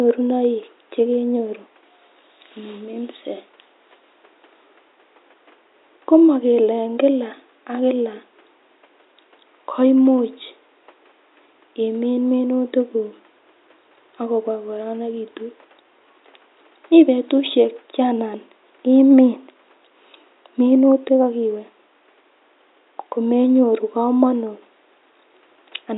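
The clip is speech, and nothing is technically wrong with it.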